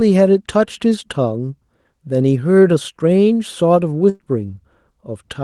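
Speech carried over a WebRTC call path, its content stopping near 12 kHz as a band-limited Opus stream at a rate that fits about 24 kbps would, shows a burst of packet loss from 4.09 to 4.21 s. About 100 ms went missing and the receiver filled it by stretching the last received sound while fading it, so a short fading continuation of that sound replaces the lost stretch. On a spectrogram this appears as a flat, smeared continuation dimming toward 4.21 s; the waveform shows a repeating, shrinking pattern before speech jumps forward.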